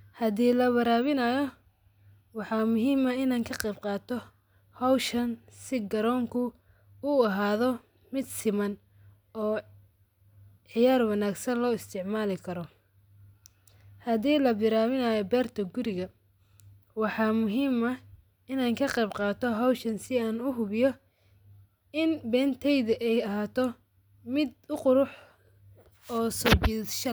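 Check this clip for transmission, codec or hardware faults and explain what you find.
Nothing in the speech signal points to a technical fault, and it stays continuous and steady throughout.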